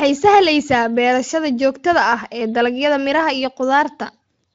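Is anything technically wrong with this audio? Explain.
No, nothing here points to a technical fault: the speech comes through a Speex encoding at what sounds like a fairly high quality setting, with only light coding damage, and no dropouts, glitches or level problems stand out anywhere in the signal.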